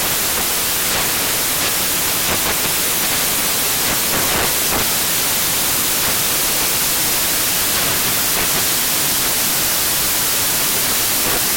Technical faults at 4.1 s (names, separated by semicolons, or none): samples built from the wrong bytes